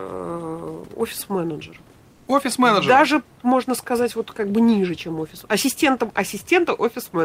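From 2.11 to 2.27 s, the background between speech turns flat and featureless for about 160 ms, dropping by about 1 dB. This is comfort noise in place of the background, likely from discontinuous transmission: the sender paused, and the receiver filled the gap with synthetic noise standing in for the real room noise.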